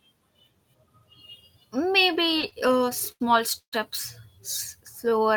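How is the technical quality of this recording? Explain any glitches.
Two network-related glitches disrupt the timing of the speech, both after the two-second mark.

From 2.13 to 3.22 s there are repeated stalls (stutter): sixteen short gaps, the longest 85 ms, totalling about a quarter of a second. Packets kept arriving late, so the jitter buffer repeatedly emptied and the receiver stretched the last sound to fill in. The speech drags and stutters. A spectrogram shows smeared, repeated frames.

At 3.58 s a call audio freeze lasts 142 ms, likely from packets held up so the jitter buffer ran dry. The last sound is held and fades, then 90 ms of silence, before the speech resumes where it stopped. The waveform shows a decaying tail and then a flat gap.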